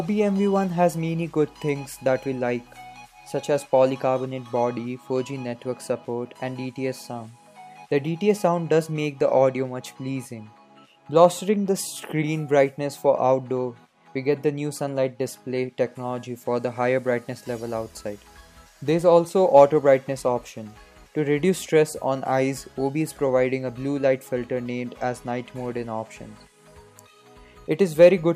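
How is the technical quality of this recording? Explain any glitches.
No glitches or technical faults are audible anywhere in the recording.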